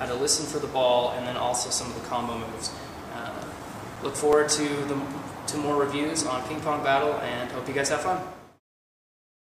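From 3.04 s to 4.88 s there are CD scratch ticks: eleven short clicks, each lasting at most a few milliseconds, recurring about six times a second. A surface blemish corrupts more data per disc revolution than error correction can rebuild, so the player interpolates or mutes those samples.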